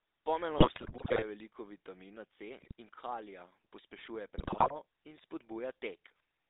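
Throughout the speech, the GSM full-rate codec models the vocal tract and excites it with sparse regular pulses, at a rate that fits 13 kbps, inside a line band of roughly 300 Hz to 3.7 kHz. The result is a plainly audible buzzy, gravelly roughness with no top end.

GSM bit errors strike from 0.58 to 1.23 s, 2.58 to 2.72 s and 4.38 to 4.77 s, where corrupted filter, pitch or gain values reach the decoder. Each burst bends the spectrum or jolts the level into squawks, pops and gargling.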